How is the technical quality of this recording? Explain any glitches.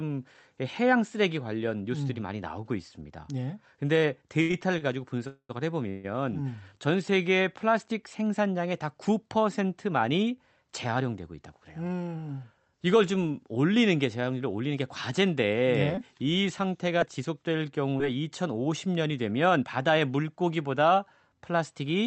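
The recording is technically flawed, with several network-related glitches in the speech. It passed through a WebRTC call path whose Opus coding, at a 48 kbps setting, limits the top end to about 8 kHz.

Repeated stalls (stutter), 4.41 to 4.83 s: Packets kept arriving late, so the jitter buffer ran dry four times. The receiver stretched the last sound to cover each wait, the longest 80 ms. About a third of this span is filler, so the speech drags and stutters though nothing is lost.

Call audio freeze, 5.27 to 5.51 s and 5.89 to 6.06 s: The likely cause is packets held up in transit, emptying the buffer. The speech halts on a held, fading continuation of the last sound, 220 ms with about 70 ms of silence at the end in the first, and 145 ms in the second. Then it resumes exactly where it stopped, inserting a gap.

Jitter buffer speed-up, 11.33 to 12.23 s and 19.50 to 19.93 s: After a backlog built up, the receiver trimmed tiny pitch-period slices repeatedly to cut delay. 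About 150 ms came out of the first stretch, making it 13% faster, and around 40 ms out of the second, 7% faster. The speech sounds hurried at unchanged pitch.

Scattered short gaps, 15.95 to 18.02 s: A few isolated packets went missing across this stretch. Each small hole, the longest around 15 ms, was patched by continuing the previous sound, and about 60 ms of audio is lost outright. The speech stays clear but carries brief ticks and hiccups.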